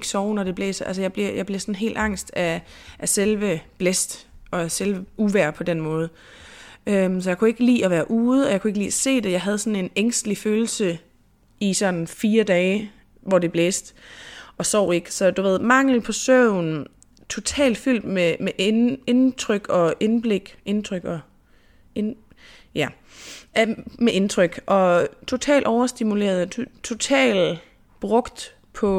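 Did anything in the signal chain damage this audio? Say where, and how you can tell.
No, nothing in the chain from capture to playback has audibly damaged this speech recording.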